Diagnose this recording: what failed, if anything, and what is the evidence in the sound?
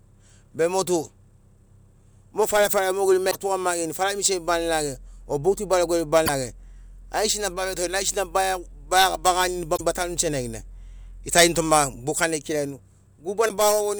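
The failure is in the codec stage: damaged data in a compressed stream. At four points in the speech, from 3.28 to 3.35 s, 6.23 to 6.29 s, 9.73 to 9.81 s and 13.45 to 13.50 s, a brief chirp, squawk, click or short hole of 50 to 80 ms cuts across the audio. Corrupted bytes made the decoder misread those frames and lose sync, so it produced garbage until it locked onto the next valid frame header.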